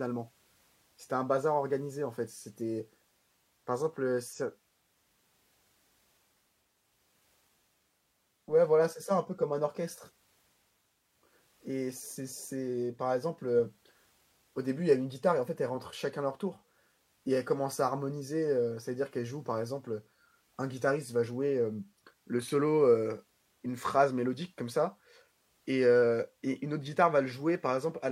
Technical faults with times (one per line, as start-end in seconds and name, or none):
none